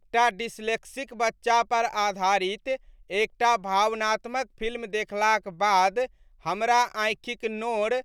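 No technical faults are audible.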